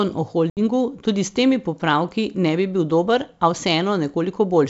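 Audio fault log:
0.50–0.60 s, packet loss on an ADPCM call: a sharp-edged gap of about 70 ms of silence, then the speech resumes with slight distortion that settles over tens of milliseconds, because the decoder's predictor and step size lost sync with the sender's during roughly seven missing packets.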